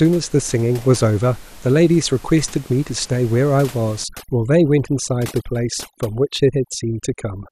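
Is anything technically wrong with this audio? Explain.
Yes, three problems can be heard in this speech clip.

Throughout, the sound is dull and carries a gurgling, granular roughness, likely from MP2 compression at a rate that sounds close to 80 kbps. Too few bits shut off upper sub-bands and coarsely quantise the rest. Unlike burbling, this is steady rather than bursty.

From 2.49 to 2.64 s there is a short burst of DAB burbling: short blips of noise in single sub-bands. Occasional bit errors slipping past error correction corrupt sub-band levels frame by frame. Its brief, isolated timing separates it from the constant codec dullness.

From 4.04 s to the end, overdone noise removal sets in. The room noise, about 22 dB below the speech, drops and breaks up into twinkling specks. Bands near the noise estimate are pushed down, taking quiet speech detail with them. Those specks separate it from codec damage.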